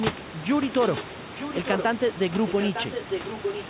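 A speech recording carries an echo leak from 0.71 s to the end. A second copy of the speech trails the original by about 0.91 s. It is only a little quieter than the direct sound. The likely cause is a far end on loudspeaker whose echo canceller let its microphone pickup return down the line. The audio stops near 4 kHz, which fits a narrowband telephone codec. Room noise sits about 12 dB below the speech.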